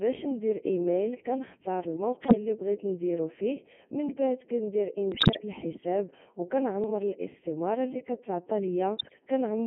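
A speech recording passed throughout through the Codec 2 vocoder at 3.2 kbit/s, heavily damaged. Because the decoder rebuilds the voice from sine waves using only pitch, voicing, energy and a spectral envelope, the result is robotic and buzzy. On a spectrogram, energy sits between 150 Hz and 3.4 kHz as unnaturally tidy harmonic stripes with the fine noise texture missing, and the waveform looks synthetic rather than like the original. Bit errors on digital voice radio break the synthetic voice four times: 2.26–2.35 s, between "ندير ايميل كنختار" and "اللي بغيت نديرو فيه"; 5.12–5.42 s, just before "الحساب و"; 6.84–6.90 s, between "الحساب و" and "الاستمارة اللي كتعطى"; and 8.98–9.20 s. Corrupted bits feed wrong pitch, level and spectrum values into whole frames, producing bleeps and warbling gibberish. The longest burst, around 5.1 s, fits a higher error rate spread over more frames. On the spectrogram, harmonic spacing jumps abruptly and bands shift, and the waveform shows sudden level steps.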